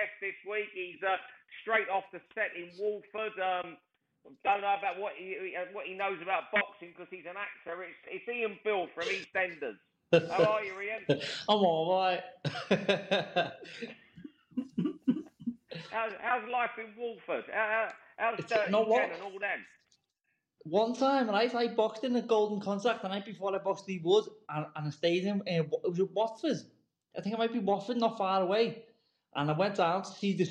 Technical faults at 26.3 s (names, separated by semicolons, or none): none